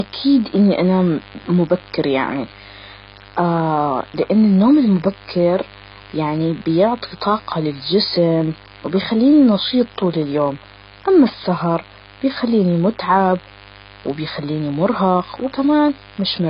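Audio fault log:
Throughout, mains buzz: there's a steady, raspy buzz sitting roughly 25 dB under the speech, built on 50 Hz. It isn't a clean hum, because something in the path, a dimmer, a rectifier or an unshielded lead, is letting sharp switching spikes through twice per mains cycle. Those spikes carry a long string of 50 Hz harmonics up into the kilohertz range, so you hear a gritty edge rather than a low drone.
Throughout, AAC compression: the speech sounds dull and smeared, with nothing at all above 5.1 kHz and heavy damage across what's left. That points to AAC-LC at a very low bitrate, something like 16 kbps, as the likely cause. At that rate the encoder pulls the bandwidth right down and starves the remaining bands, leaving gaps or filling them with substitute noise, so sustained sounds warble and sibilants come out fizzy and blurred.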